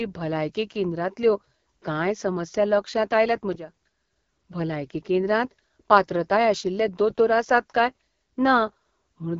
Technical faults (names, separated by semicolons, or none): AMR wideband (HD Voice) codec